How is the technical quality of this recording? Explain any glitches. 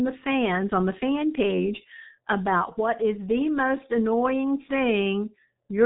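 The quality is poor throughout, because the speech has passed through the G.723.1 codec. For the whole clip, nothing above 3.8 kHz survives. The codec works in coarse 30 ms frames and updates its voice model slowly. The damage is heavy, fitting a bitrate near 6 kbit/s. The speech sounds muffled and hoarse, and consonants are smeared.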